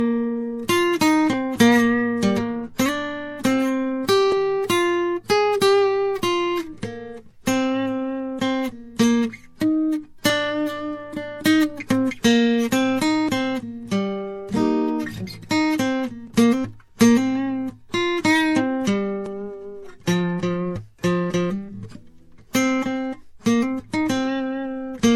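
Throughout the music, nothing is present above 16.6 kHz, and the treble carries a mix of two kinds of coding damage: smeared, swirling transients layered over a grainy, watery texture in sustained material. This combination is likely the result of transcoding between lossy codecs. It fits an MP3 encode at around 64 kbit/s followed by a Vorbis encode at around 50 kbit/s. The second encoder spent its limited bits re-coding the first encoder's artefacts while adding its own, and the lower cut-off from the chain remains.

At 4.32, 13.29, 16.27 and 19.26 s there are brief skips. Each removes roughly ten milliseconds of music, and the material on either side is butted together with no gap, so each skip is heard as a small jolt in the rhythm. The events are spaced at multiples of 3 s, which points to audio missing between chunks: a recorder or processor working in 3-second blocks that loses a sliver of sound at each handover.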